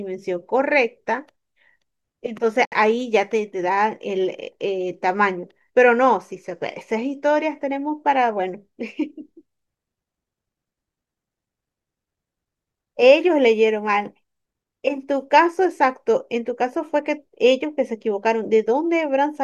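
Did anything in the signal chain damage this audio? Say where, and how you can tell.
Yes. At 2.65 s the speech cuts to a silence of about 68 ms, then resumes at 2.72 s exactly where it stopped. This is a gap at a join of encoded pieces, a codec-stage fault where separately encoded segments were spliced without trimming encoder delay and end padding.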